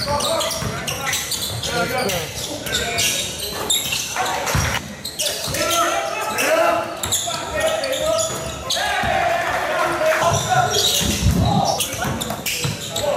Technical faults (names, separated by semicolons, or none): none